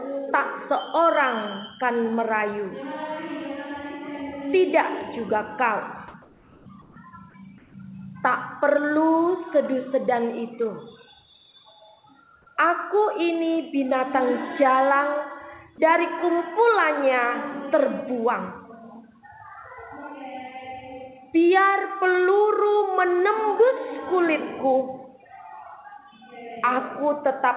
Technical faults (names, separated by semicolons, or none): comfort noise in place of the background